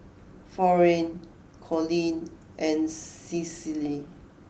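No technical faults are present in this speech; only the light character of Opus voice compression can be heard.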